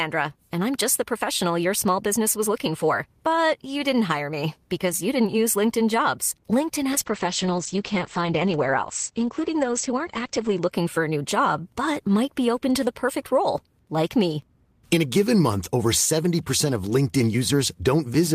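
From 6.92 s to 10.77 s there is a call bitrate drop. The connection's bandwidth estimate fell, so the encoder was pushed from 32 kbps down to 11 kbps. It stays at that floor for about 3.6 seconds. At this rate the codec quantises coarsely and trims the top end, from 20 kHz down to 8 kHz. The speech turns dull, rough and watery. Full clarity returns just before "for a new job".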